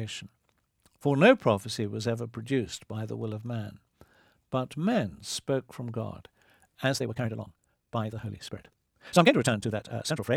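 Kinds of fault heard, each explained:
Time-stretched section: from about 6.82 s to the end, the speech suddenly runs at 1.99 times its earlier pace while the pitch stays where it was, so the delivery turns rushed. This is likely software fitting the audio into a shorter length, preserving pitch by discarding short slices of the waveform and splicing the rest together rather than simply playing it faster.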